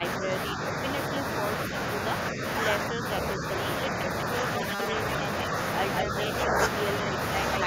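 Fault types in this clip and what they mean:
Speech suppressed in double talk: Six brief dips where the level sinks by about 5 to 10 dB for a tenth of a second or two, at 0.0 to 0.33, 0.54 to 0.61, 2.32 to 2.42, 2.9 to 3.04, 3.36 to 3.43 and 6.03 to 6.14 s. This is likely an echo canceller ducking the talker while the far side also spoke. Unlike a dropout, the sound is turned down rather than replaced by noise.
Robotic sound from repeated short buffers: From 4.57 to 4.94 s the audio becomes a rigid metallic buzz locked at 200 Hz, which points to 5 ms chunks being replayed. Roughly half the material in that stretch is repeats, with the real audio skipped. The likely cause is audio arriving too seldom. It differs from a pitch-shift error because the buzz stays fixed while the sound underneath still roughly follows its own contour.
Echo leak: Around 5.98 to 6.02 s, a short copy of the talker returns about 189 ms late and about 5 dB below the direct sound. 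This is likely loudspeaker pickup that an echo canceller failed to remove. It differs from room reverberation because it is a discrete, delayed repeat rather than a smooth decaying tail, and it sits right beside the ducking dip at 6.03 s.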